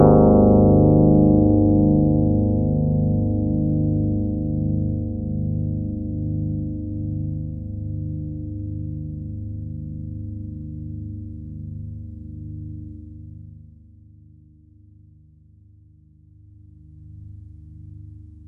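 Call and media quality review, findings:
No faults found in the recording; nothing to flag.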